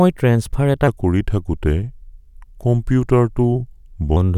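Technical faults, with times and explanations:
0.88–4.16 s, section at the wrong speed: after "ট্ৰেন্সফাৰ এটা" the speech runs at 0.85 times speed. Pitch drops about three semitones. This is likely from a mismatched clock.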